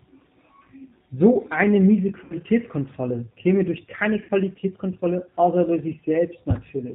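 Throughout, the speech carries the sound of the G.729 codec. It rebuilds each 10 ms frame from a vocal tract filter, a pitch predictor and a few pulses, which fits an 8 kbit/s stream. The result is plainly rough and slightly synthetic. A spectrogram shows nothing above 4 kHz and smeared, grainy harmonics.

At 2.24 to 2.33 s and again at 4.23 to 4.31 s, VoIP packet loss concealed by the speech codec appears. Each time about 60 ms of audio went missing, consistent with three 20 ms packets. The decoder kept repeating its last pitch and filter at falling gain, so the audio turns into a brief buzzy tone or coloured noise that fades and stays weak as it recovers. On a spectrogram this looks like flat, repeated stripes. On the waveform it looks like a decaying, overly regular stretch.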